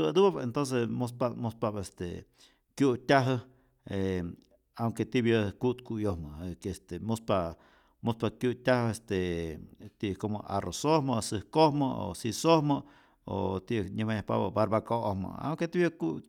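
No audible faults anywhere in this recording.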